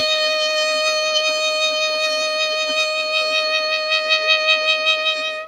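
It's a music clip with a noise suppressor applied to music running the whole way through. A speech-tuned suppressor is treating the sustained tones and ambience as noise, so the level keeps dipping and recovering by around 5 dB, giving a pumping, thinned-out sound.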